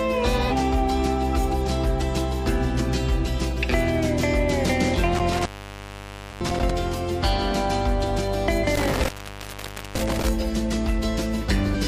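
Damaged data in a compressed stream at 0.47–0.52 s and 1.63–1.68 s: the decoder loses frame sync, producing brief glitches that appear as short, smeared broadband blocks on the spectrogram. Intermittent contact at 5.15–6.71 s: a loose connection opens for about 1.19 s, and the waveform collapses to faint hiss between crackly vertical spikes at its edges. Another corrupted-data blip follows at 8.60–8.64 s, then a second intermittent contact at 8.75–10.29 s, open for about 0.87 s. A final corrupted-data glitch comes at 11.71–11.76 s.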